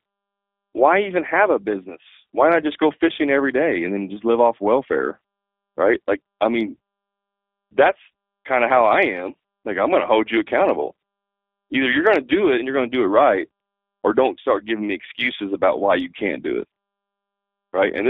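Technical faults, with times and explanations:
throughout: G.729 codec. The speech sits in a narrow band from about 300 Hz to 3.6 kHz. It sounds plainly rough and slightly synthetic, which fits an 8 kbit/s G.729A coder. That coder rebuilds each short frame from a vocal tract filter, a pitch predictor and a few pulses.
7.91 to 7.93 s: VoIP packet loss concealed by the speech codec. There is a brief smear just before "kind of how I". The gap fits one lost 10 ms frame. The decoder filled it by repeating its last pitch and filter at reduced gain.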